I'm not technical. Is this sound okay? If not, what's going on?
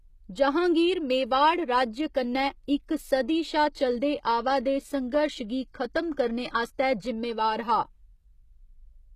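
No. The recording was likely squeezed down with HE-AAC compression, a method that saves space by storing only the lower, fuller part of the sound and then rebuilding the brighter top end from copies of that lower part. Because the treble is a reconstruction rather than the real thing, the speech sounds plainly processed from start to finish: s sounds come out gritty, metallic or lispy, and nothing is left above about 15 kHz.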